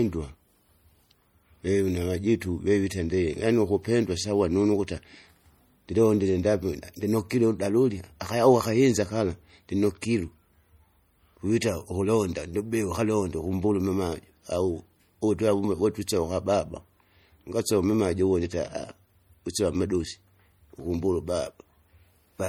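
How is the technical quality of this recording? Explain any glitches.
The recording carries plainly audible codec damage throughout and one brief pre-echo.

Across the whole clip, the speech has a watery, swirling quality with chirpy sibilants, likely from MP3 compression at a low bitrate, which fits something around 48 kbps. Short of bits, the encoder zeroes weak frequency lines that flicker on and off between frames. A spectrogram shows patchy, blinking high-frequency detail and nothing above 21 kHz.

At 10.01 s, a sharp attack is preceded by about 12 ms of hiss: pre-echo. Quantisation noise meant for the loud attack spread across the whole transform block, filling the quiet moment before it. A waveform shows a noisy smear just ahead of the onset, and a spectrogram shows a broadband haze before it.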